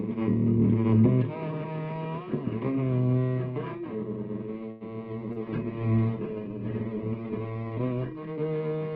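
At 4.71 s the sound hangs for about 90 ms, to 4.83 s, with the last moment stretched out instead of moving on, which may carry a buzz or a dip in level. This is a short stall from a late packet. The jitter buffer ran dry while waiting for it, so the receiver extended what it had already played, then resumed from the same point once the packet arrived. Nothing is lost, but playback now runs about 90 ms later than before.

From 5.12 s the audio turns coarse and dull, losing everything above 8 kHz where it previously reached 20 kHz. It stays that way for about 3.1 s and clears at 8.31 s. This is a call bitrate drop. The bandwidth estimate fell and the Opus encoder was pushed from 96 kbps down to 12 kbps. At that rate it quantises far more crudely and narrows its audio band, which produces the rough, muffled quality until the bitrate recovers.

Inside that degraded stretch, between 5.32 and 5.39 s, there is a brief smear where the sound wobbles rather than continuing cleanly. 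This is short concealed packet loss. About 40 ms of audio never reached the decoder in time. The receiver covered the gap with about 34 ms of synthesised continuation, extrapolating pitch if the sound was tonal or shaped noise if it was not, and then crossfaded back into the real signal. The result runs a little longer than the audio it replaced.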